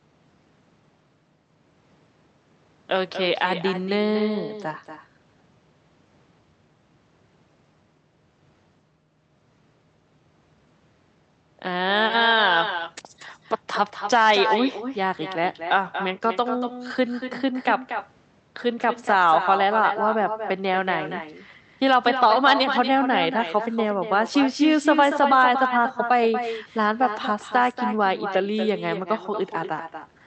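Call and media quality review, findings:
Echo with no canceller, entire clip. Each phrase is followed by a quieter, thinner copy about a fifth of a second later, about 8 dB below direct speech. Far-end loudspeaker feeds its own mic, nothing cancels it, and it returns over the network round trip. Codec path heard only as band limit near 8 kHz with Opus coding noise.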